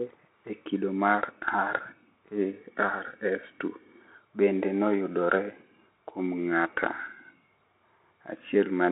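Throughout, the speech carries plainly audible Bluetooth CVSD headset codec damage. Its one-bit delta coding, consistent with a 64 kbps stream, confines the band to 250 Hz to 3.7 kHz, so a spectrogram goes blank above 3.8 kHz. The slow-adapting step roughens sibilants and adds grainy hiss.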